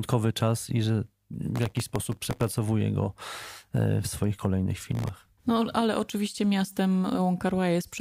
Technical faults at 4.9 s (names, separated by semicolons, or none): processor overload crackle